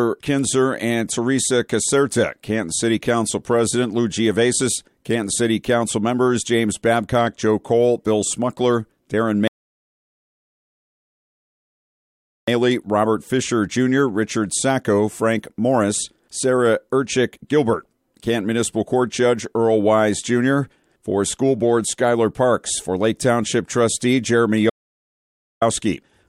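The audio runs for about 26 seconds and carries two distinct faults. At 9.48 s playback halts in a rebuffering stall: the sound stops dead, three seconds of silence follow, and at 12.48 s it picks up at exactly the point where it left off. Nothing is missing; the player simply ran short of downloaded data and waited for more, so 3.0 s of time is inserted. On a waveform this shows as a flat line with clean, matching edges, and on a spectrogram as a full-height blank band with identical content on either side. Later, from 24.70 s to 25.62 s, there is an audio dropout to silence. The sound cuts out mid-flow and returns about 0.92 s further on, so that stretch of material is gone, and the gap holds silence without even a trace of room tone. The likely cause is the input signal being lost briefly while recording carried on writing silence. The waveform sits flat there, and the spectrogram shows a completely empty column whose two edges don't join up.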